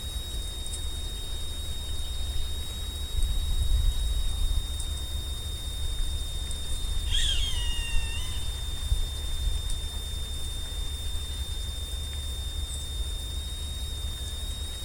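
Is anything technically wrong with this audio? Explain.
Yes. A high, thin whistle sits over the audio from start to finish, wandering in pitch between about 3.6 and 3.8 kHz and only roughly 10 dB below the main sound. This is switching supply whistle: a switch-mode power supply near the recording chain is cycling at an audible rate, or two supplies are beating against each other, and its shifting frequency leaks into the signal as a drifting tone.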